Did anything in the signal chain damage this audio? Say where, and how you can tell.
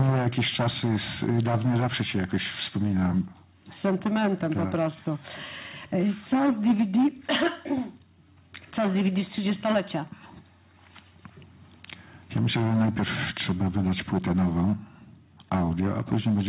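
No, nothing in the chain did any damage here: the top end stops at about 4 kHz, which is just what a narrowband call codec like G.711 leaves you with, and the call microphone processing trimming the lowest bass is the normal behaviour of that stage.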